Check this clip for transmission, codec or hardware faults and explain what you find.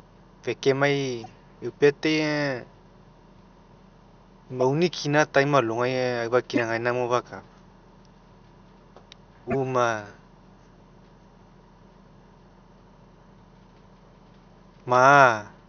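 Four short bursts of corrupt frame decoding appear in the speech, at 1.24–1.26 s, 4.61–4.63 s, 6.55–6.60 s and 9.50–9.55 s. In each, damaged bits reached the decoder, which played the frame anyway. Misread gains and codes put energy at the wrong frequencies. The results are brief chirps and noise blips lasting one to a few frames. The 6.55 s burst is loudest, peaking near -10 dBFS. The first is faintest, around -30 dBFS. Room noise sits about 50 dB below the speech and is not a fault.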